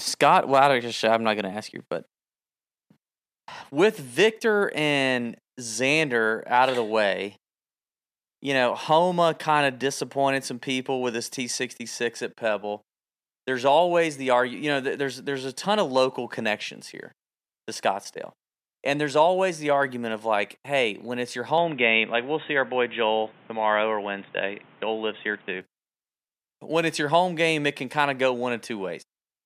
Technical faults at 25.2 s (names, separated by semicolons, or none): input switched to a poorer device